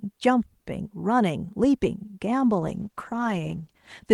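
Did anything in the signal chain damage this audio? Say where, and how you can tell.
Yes. A call bitrate drop at the codec stage starts at 2.6 s and lasts to the end. The speech turns rough and muffled, which fits the encoder falling from about 48 to 14 kbps. On a spectrogram the upper band is cut off and the harmonics smear.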